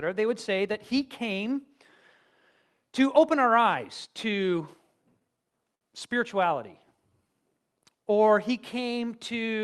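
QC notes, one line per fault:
5.19–5.84 s, repeated stalls (stutter): packets reached the receiver late and unevenly, so its jitter buffer emptied four times in under two-thirds of a second. Each time, the decoder stretched the last sound to cover the wait, about 90 ms of filler in all, roughly a seventh of that stretch, the longest single gap about 61 ms. Nothing drops out, but the speech catches and hiccups, dragging at each gap before it picks up again.
6.96–7.82 s, jitter buffer slow-down: with its reserve running low or its target delay just raised, the buffer built up a reserve by repeating individual pitch periods and bits of pause, adding about 101 ms. That stretch plays at 89% speed while keeping its pitch, so syllables sound drawn out and slightly sluggish, all on an Opus call path whose audible bandwidth stops near 12 kHz.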